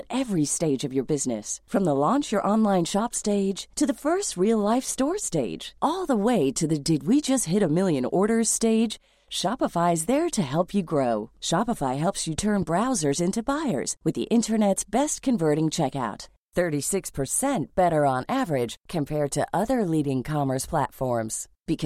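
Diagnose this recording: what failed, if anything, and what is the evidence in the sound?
A loud pop occurs between 12.39 and 12.65 s. It is two sharp pulses in quick succession, peaking a few dB above the speech, which carries on underneath. The likely cause is a voltage step in the analogue wiring, from a plug, switch or static discharge.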